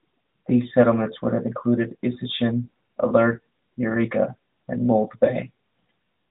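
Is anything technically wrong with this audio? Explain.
No, there is nothing technically wrong with this speech.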